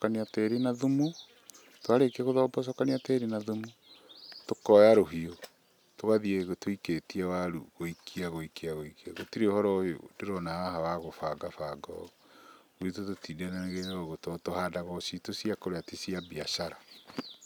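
No technical faults are audible anywhere in the speech.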